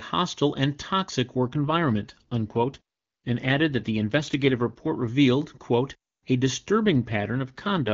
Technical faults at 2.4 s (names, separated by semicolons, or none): AMR rate drop